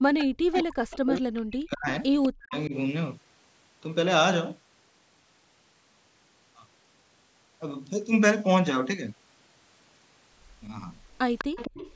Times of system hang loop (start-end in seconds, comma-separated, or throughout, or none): none